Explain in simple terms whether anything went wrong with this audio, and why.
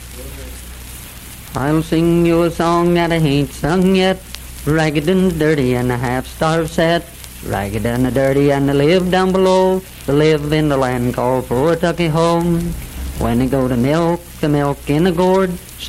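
Nothing went wrong here; no technical faults can be heard.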